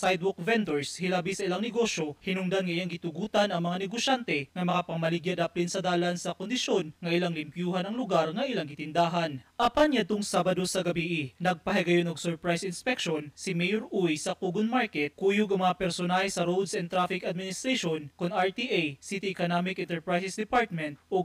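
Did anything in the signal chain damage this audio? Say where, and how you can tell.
Yes. Channel delay (comb filtering) runs throughout. One channel lags by about 20 ms, likely a buffer offset, and mono summing carves notches starting near 20 Hz. The sound turns rough and slightly doubled.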